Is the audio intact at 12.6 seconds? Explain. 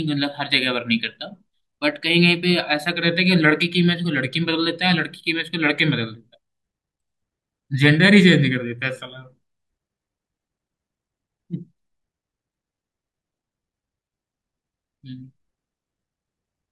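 Yes, at 12.6 seconds the speech plays through cleanly, with no dropout, click, distortion or other fault at that moment.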